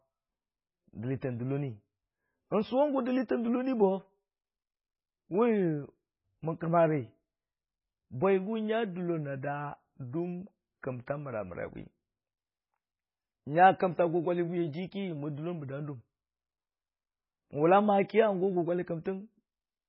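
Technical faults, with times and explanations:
Throughout, MP3 compression: the speech has heavy codec damage, with a watery, swirly texture and no content above 5.5 kHz, so it sounds dull and band-limited. The likely cause is a low-bitrate MP3 encode, and the damage fits a rate around 16 kbps. With so few bits, the encoder drops weaker frequency lines, which flicker in and out between frames to give the watery quality, and it removes the treble above a fixed cut-off.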